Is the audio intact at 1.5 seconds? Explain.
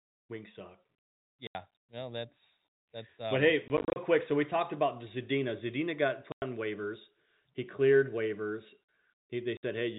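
No. From 1.47 to 1.55 s there is packet loss filled with silence, just before "no that's that's". The receiver lost about 80 ms of audio, which fits eight 10 ms packets, and played silence instead. The speech drops to a hard-edged gap.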